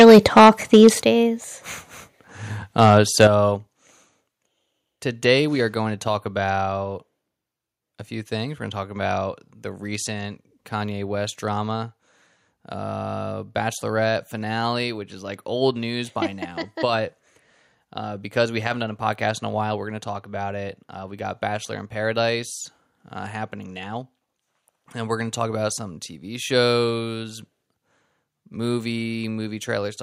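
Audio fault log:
0.00–0.88 s, microphone overload: the opening speech sounds harsh and crackly, with peaks pushed about 10 dB past the ceiling and around a tenth of samples flattened, likely from input gain set too high.
1.02 s and 2.04 s, microphone volume stepped down: voice and background drop abruptly, by about 9 dB and then about 2 dB, as the input level is likely pulled back after that distortion.
2.82–2.91 s and 3.20–3.24 s, microphone overload: two short bursts of crackle where peaks run about 2 dB over and get their tops clipped, roughly one or two percent of samples.
3.27 s, microphone volume stepped down: a sudden level drop of about 8 dB right after the second burst, which is likely the gain being cut again in response.
5.55 s, microphone volume stepped down: one more small step of about 2 dB, heard as a slight sudden dip in both voice and room sound.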